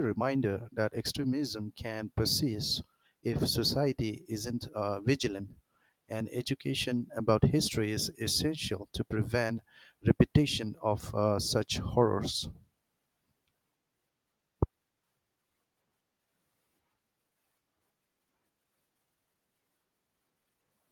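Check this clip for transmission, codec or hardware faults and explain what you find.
Nothing in the speech points to a transmission, codec or hardware problem.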